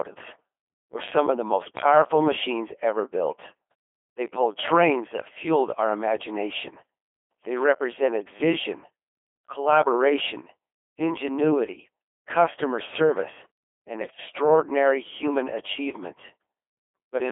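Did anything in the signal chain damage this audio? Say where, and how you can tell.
Yes. The codec stage is a Codec 2 vocoder, likely near 2.4 kbit/s. It resynthesises speech from pitch and envelope in a 300 Hz–3.4 kHz band, so it sounds buzzy and robotic throughout.

Bit errors on digital voice radio corrupt vocoder frames at 3.71–3.74 s, after "powerful machines ever built", and at 14.02–14.18 s, after "ingenuity customer service and". The speech jumps in pitch and level into warbling bleeps.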